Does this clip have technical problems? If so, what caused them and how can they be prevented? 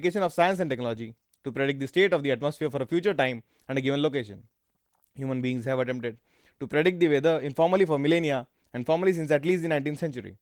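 No, nothing in this speech recording stood out as a technical problem on listening, so there is nothing here that calls for prevention.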